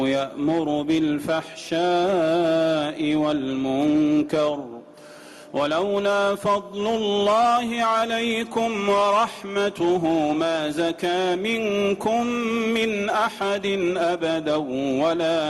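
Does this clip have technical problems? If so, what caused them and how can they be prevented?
No, there are no technical problems in this clip.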